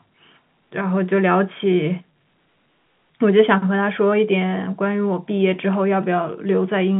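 No technical faults can be heard in this speech, which comes through a standard G.711 telephone line with nothing above 3.8 kHz.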